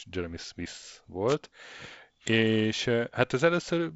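At 1.27 s a wireless microphone noise hit breaks into the speech and lasts until 1.36 s, about 80 ms. The radio link from an analogue FM microphone faded there, as reflected signals cancelled the direct one. Receiver noise rose over the weakened signal. It is heard as a short swish of static. The speech runs through wideband telephone coding that stops near 7.7 kHz. Its light grain fits G.722 at a reduced rate such as 48 kbit/s.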